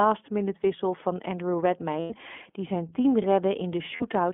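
Throughout the clip, the speech runs through the iLBC codec, a narrowband VoIP coder that rebuilds each frame's excitation on its own. The line passes only about 200 Hz to 3.4 kHz, and the short frames fit the 20 ms, 15.2 kbps mode. The coding damage is plainly audible: the voice is thin and band-limited, with a rough, slightly synthetic grain.

From 2.00 to 2.12 s, just before "die zijn team", lost iLBC frames leave about 100 ms of missing audio, which fits five 20 ms frames. The decoder fills the hole by repeating the last pitch cycle blended with noise, so the gap sounds like a held, buzzy vowel. At 3.96 to 4.03 s, a shorter 40 ms loss gives a brief breathy smear. Because each frame decodes independently, the voice recovers almost immediately after both.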